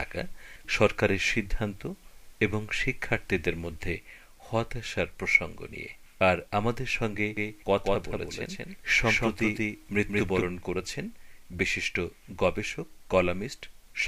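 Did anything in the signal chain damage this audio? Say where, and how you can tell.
Yes. From about 7.37 s to 10.45 s there's a doubled audio track: a second full-band copy trails the original by around 200 ms at roughly equal level, so everything gets a hard slap-back echo with no decay or room colour. It switches on and off abruptly at both ends. The likely culprit is the capture or routing stage, with the signal picked up again through a slower path, or an edit leaving two misaligned copies stacked.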